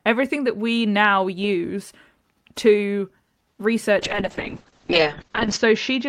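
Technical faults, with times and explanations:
3.51–3.60 s, short stall from a late packet: the buffer ran dry, so the receiver stretched the last sound for 70 ms, then resumed with nothing lost.
3.99 s to the end, call bitrate drop: the encoder fell from 64 to 6 kbps and the bandwidth from 20 to 8 kHz, so the speech goes muffled and rough, bottoming out for about 1.6 s.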